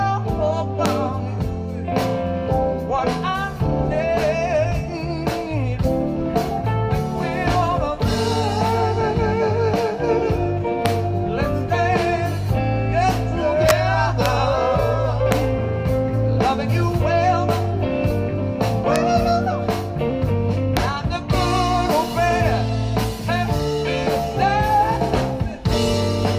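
The audio has integer overflow. Violent, sharp cracks land at 0.86, 10.86, 14.26, 15.32, 18.96 and 20.77 s. A longer burst runs from 13.69 to 13.71 s. At each of these moments a loud peak pushed the sum past the largest integer value. The value wrapped to the opposite sign instead of being held at the limit. The waveform flips across its full range, which is far harsher than clipping. The overshoot was small, about 0 to 2 dB, with the biggest at 13.69 s.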